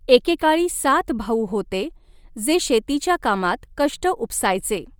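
From start to finish the speech carries a breathy, grainy edge where the upper band has been thinned and noise-filled, likely Bluetooth LC3 compression running around 48 kbps in 10 ms frames.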